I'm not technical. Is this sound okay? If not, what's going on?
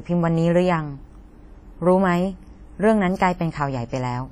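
No. The speech is heavily damaged by compression from beginning to end, most likely WMA compression at a low quality setting. This kind of codec stores sound in chunks tens of milliseconds long and discards faint detail to save space. The leftover error smears across each chunk, so the voice sounds ringing and washy, with a hiss that rises and falls along with the speech instead of staying steady in the background.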